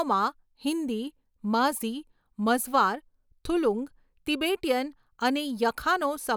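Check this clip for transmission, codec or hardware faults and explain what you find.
Nothing stood out on listening to this speech clip.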